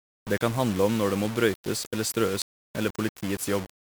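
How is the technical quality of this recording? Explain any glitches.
Technical quality is poor: the whole recording carries coarse, gritty distortion, and there is one brief glitch.

Throughout the clip, the speech sounds grainy and harsh, with the distortion rising and falling with the voice. The likely cause is low bit depth without dither: the audio seems reduced to about 5 bits and rounded, so every sample snaps to a few coarse levels and the error tracks the signal, sitting only around 15 dB below the speech. On a waveform the trace looks visibly stair-stepped. A spectrogram shows broadband hash filling in between the harmonics.

At about 2.42 s there is a short blip caused by damaged data in a compressed stream. Data at that point was corrupt, so the decoder misread the affected frame, lost its place and jumped to the next valid frame header. That produces a tiny glitch of a few milliseconds. 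On the waveform it shows as a small discontinuity. The spectrogram shows a thin vertical smear of energy at that instant.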